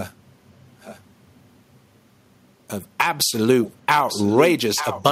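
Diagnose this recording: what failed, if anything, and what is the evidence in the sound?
Echo leak, sitting in call processing. You get faint delayed copies of the speech at 0.81 to 1.0 s and 3.65 to 3.74 s, roughly 20 dB under the talker, then stronger ones, only about 10 dB down, at 4.08 to 4.48 s and 4.75 to 5.03 s. Each trails the original by 894 ms. Likely the far end is on a loudspeaker, and its echo canceller let fragments of what its mic picked up slip back down the line.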